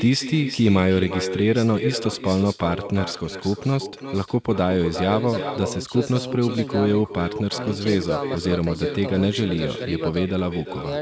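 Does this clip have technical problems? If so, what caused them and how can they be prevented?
Yes. Echo with no canceller runs throughout: the far end's loudspeaker feeds its microphone, returning this speech around 0.4 s later, about 10 dB quieter. Enabling acoustic echo cancellation at the far end, or having that listener wear headphones, prevents it.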